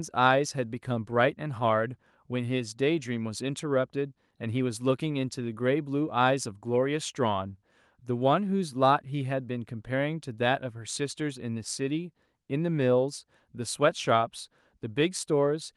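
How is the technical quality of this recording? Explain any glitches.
The technical quality of this recording holds up, with no glitches to explain.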